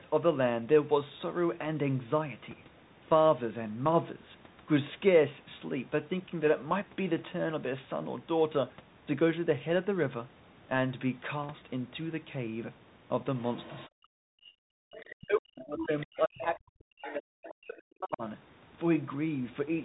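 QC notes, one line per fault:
throughout: Bluetooth CVSD headset codec. The speech is band-limited with nothing above 4 kHz, and a fine granular hiss sits under it. Sibilants turn scratchy and loud bright passages smear where the one-bit delta modulator's adaptive step can't keep up, which fits a 64 kbps CVSD link. Unlike a generic low-pass or a lossy transform codec, the damage is a grainy, slope-overload roughness rather than swirling or bubbly artefacts.
13.38–13.88, 14.91–15.14, 15.80–16.06, 16.41–16.57, 17.06–17.14: other side's voice leaking through. A second voice appears in short scraps. It is quiet at first, about 25 dB and then about 20 dB below the main speech, and it peaks around 15.80–16.06 at only about 10 dB down. This is likely residual loudspeaker echo the canceller didn't fully remove. It differs from crosstalk or a second talker in the room because it comes and goes in fragments tied to the canceller's suppression.
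13.88–14.51, 15.14–18.23: speech suppressed in double talk. The main talker's level sinks deeply, by roughly 40 dB at worst. The first dip lasts about half a second and the second about three seconds, overlapping the leaked voice. The likely cause is the echo canceller failing to separate near and far speech while both were active and ducking everything. Unlike a dropout or packet loss, the cuts track the other side's activity and partly attenuate rather than leaving clean silence.
14.79–14.86: background gated by the echo canceller. The room sound drops sharply by about 40 dB for roughly 70 ms, then returns when the canceller releases. The background itself disappears, which distinguishes this from suppressed speech, and its brief, hard-edged on-off shape sets it apart from a noise gate riding the talker's own pauses or from codec dropouts.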